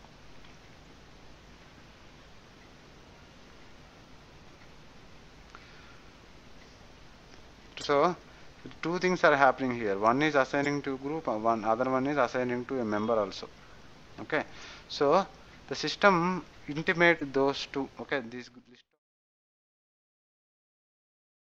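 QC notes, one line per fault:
0.83–0.87 s, 7.80–7.84 s, 10.62–10.67 s, 14.59–14.64 s and 17.18–17.22 s, damaged data in a compressed stream: five brief chirps or blips, each about 40 ms long. Corrupted bytes make the decoder misread those frames, lose sync and hunt for the next valid frame header, so a short burst of garbled sound plays. The last blip falls just before the smooth fade-out that begins around 17.5 s.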